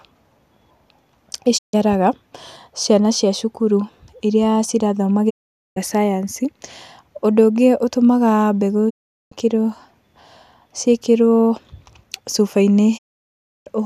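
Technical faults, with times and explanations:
1.57–1.75 s, 5.29–5.78 s (after "cia thukuru iria irathoma"), 8.89–9.33 s (after "ũndũ ũngĩ ũtũmaga mbegũ"), 12.97–13.68 s, digital broadcast dropout: the receiver lost or rejected frames and muted. The speech fades out over about 20 ms, goes silent, and resumes later with that stretch missing.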